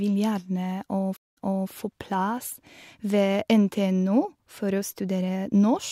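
At 1.17 s the speech cuts out for about 0.2 s in a stream reconnect: the connection dropped, the player restarted its decoder mid-stream, and the server resent buffered audio, so playback resumes 0.34 s earlier, briefly repeating speech, faded in, through 1.7 s.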